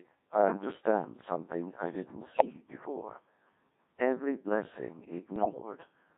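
From the start the whole clip sits behind a Codec 2 vocoder, and a pretty heavily squeezed one. The sound points to its 1.6 kbit/s mode, with a band of roughly 150 Hz to 3.7 kHz. Nothing of the original waveform gets through. The decoder just rebuilds the talker from pitch, voicing, level and a rough spectral envelope, painting it back with sine waves. So the speech comes out buzzy and robotic, with that synthetic, hollow sheen everywhere.

Then from 2.28 to 2.70 s you get bit errors on digital voice radio, the kind you hear at the fringe of coverage. At a rate this low every bit steers a whole frame's pitch, loudness or tone colour, so a few percent of flipped bits send the voice lurching. It jumps in pitch, warbles and briefly dissolves into bleepy gibberish. It happens again from 5.36 to 5.61 s, and this burst is harsher, with something like one bit in ten going bad.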